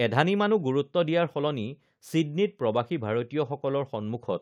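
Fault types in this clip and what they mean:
No faults found in this audio.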